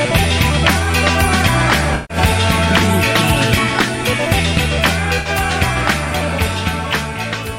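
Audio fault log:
1.95–2.17 s and 5.19–5.29 s, AAC frame loss with concealment: two short dropouts (about 150 ms, which fits seven lost frames, then 64 ms, which fits three) where the decoder repeats the last good spectrum with randomised phase, leaving a smeared, noisy, phasey patch in place of the real signal.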